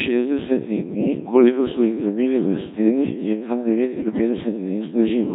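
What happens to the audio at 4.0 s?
Right after "je kar", from 4.00 to 4.21 s, you get bit errors on digital voice radio. Flipped bits corrupt the vocoder's per-frame pitch, level, voicing and spectrum values, so the synthetic speech lurches into warbles, bleeps and robotic gibberish. The span fits about five frames hit, with something like 7 percent of bits wrong.

That's all sitting on top of the Codec 2 vocoder running at 1.3 kbit/s. It throws away the waveform and rebuilds the speech from sine waves using just pitch, voicing, energy and a spectral envelope, so everything at that moment comes out heavily robotic and buzzy.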